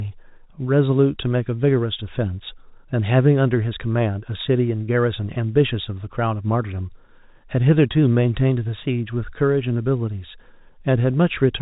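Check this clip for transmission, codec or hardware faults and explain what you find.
Nothing wrong turns up here; the speech just has the narrow, phone-line sound of ordinary G.711 telephone coding, with nothing above 4 kHz, which is exactly how that path is meant to sound.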